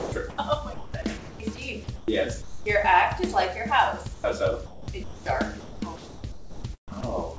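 The sender's voice detector likely misjudged parts of the sound as background several times, so the receiver filled those stretches with comfort noise. Over the G.722 call path, nothing reaches above 8 kHz.

From 0.00 to 0.38 s, the detector toggled between sending and not sending, chopping the sound. About 0.2 s of audio is replaced by synthetic noise. The same chopping returns from 0.74 to 1.58 s, with about 0.46 s replaced, and from 1.84 to 2.08 s, with about 0.16 s replaced. In each stretch the audio breaks into holes.

From 2.42 to 2.66 s, the detector stopped sending altogether. This drops the sound: 0.19 s of audio is lost and steady comfort noise runs for 0.24 s before the signal resumes. A shorter drop follows from 4.14 to 4.24 s, with 0.1 s lost.

Chopping resumes from 4.66 to 5.26 s, with about 0.44 s replaced. The longest stretch runs from 5.60 to 7.03 s, where about 0.88 s of the sound gives way to intermittent comfort noise.

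A final drop at 7.37 s swaps about 10 ms of the closing sound for noise.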